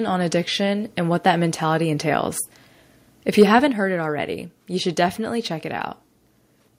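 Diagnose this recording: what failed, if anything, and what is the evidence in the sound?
Microphone overload at the converter, 3.40 to 3.43 s, just before "haven't heard it already": peaks run about 2 dB past full scale and roughly a tenth of samples are flattened, giving a harsh crackle. The likely cause is excessive microphone input gain.

Microphone volume stepped down at 3.72 s, just before "heard it already you": voice and background fall together by 5 dB in one step, shortly after the clipped peak. This is call processing, likely automatic gain control cutting the device input level after detecting overload.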